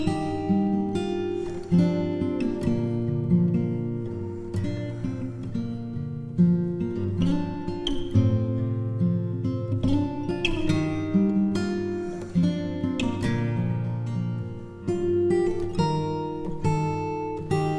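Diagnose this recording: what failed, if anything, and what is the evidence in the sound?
Nothing failed; no fault is audible anywhere.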